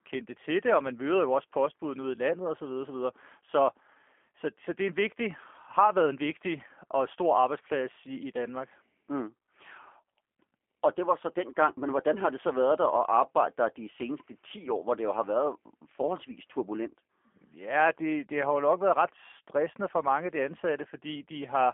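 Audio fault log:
Throughout, G.729 codec: the speech has passed through a low-rate telephony codec of the G.729A kind, which fits an 8 kbit/s stream. It rebuilds each 10 ms frame from a vocal-tract filter, a pitch predictor and a few coded pulses rather than the true waveform. The result is plainly rough and synthetic, confined to a telephone band of roughly 300 Hz to 3.4 kHz, with nothing above 3.5 kHz.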